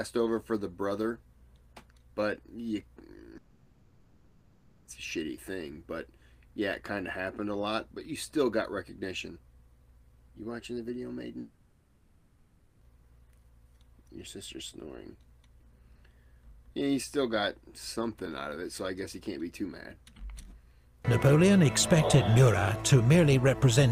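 From 3.37 to 4.87 s and 11.39 to 12.83 s, the sound smears into a fading buzz, then resumes with that stretch gone: likely a long network dropout.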